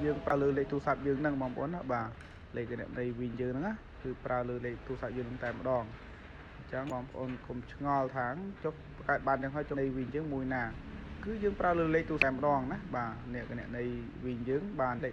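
Damaged data in the compressed stream makes the decoder misread frames, lose sync and hunt for the next frame header. Each time this produces a brief chirp or blip: at 0.30 to 0.32 s, 6.90 s, 9.73 to 9.75 s, 12.22 s and 14.98 s.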